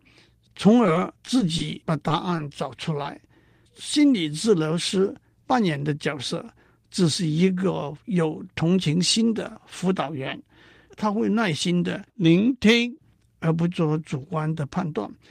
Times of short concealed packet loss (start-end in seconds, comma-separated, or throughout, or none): 2.08-2.39, 2.77-3.04